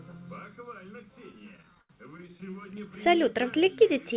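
From 1.32 to 2.54 s the speech falls into repeated stalls (stutter): eighteen short hitches where packets arrived late and the jitter buffer ran dry, so the receiver stretched the last sound to fill each wait, fading it on the longest gap of 76 ms. About 256 ms is filled this way, roughly a fifth of the stretch. Unlike packet loss, nothing is actually missing. The speech drags and lurches instead of skipping ahead, all within the call path's band, which stops at 4 kHz.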